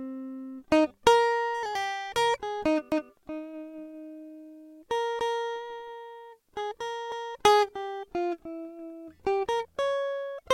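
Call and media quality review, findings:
Overlapping chunks in the music: short stutter at 2.92–3.12 s and again at 7.12–7.32 s, 200 ms replayed each time. Chunks look like 4 s blocks, each starting 200 ms before the previous one ended, so the tail gets played twice at every join.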